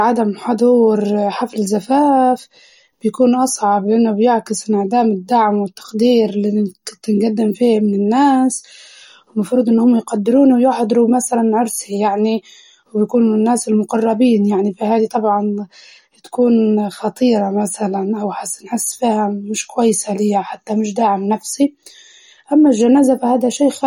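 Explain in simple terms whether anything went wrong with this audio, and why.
Yes, something went wrong: the speech carries plainly audible damage from start to finish, most likely from MP3 compression squeezed too hard. The encoder throws away quiet detail it judges unimportant, and those bits flicker in and out, leaving a watery, swirly edge around the speech, with nothing above about 18.5 kHz. A simple treble cut would only dull the sound evenly; this warbles and shifts as it goes.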